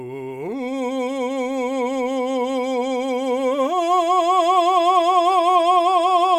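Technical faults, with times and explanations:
No technical faults can be heard in this music.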